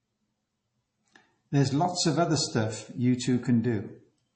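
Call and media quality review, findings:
Watery, swirly texture through the whole speech clip; nothing above 8.3 kHz, s sounds dull. Likely MP3 compression: encoder starved of bits, fixed treble cut-off, weak frequency lines toggling frame to frame, which fits a low bitrate near 32 kbps.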